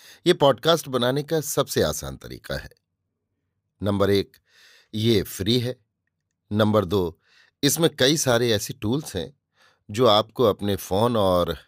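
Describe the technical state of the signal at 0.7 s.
At 0.7 s the speech signal is intact, with no dropout, clipping, distortion or other fault audible at that moment.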